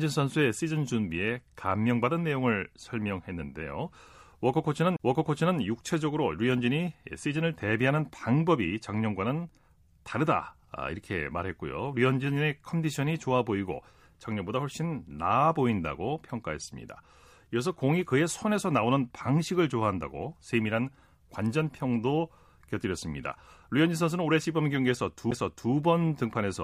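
CD skips at 4.96 to 5.00 s and 25.31 s: the laser jumped tracks, muting the speech for about 30 ms, then about 10 ms, before resuming elsewhere.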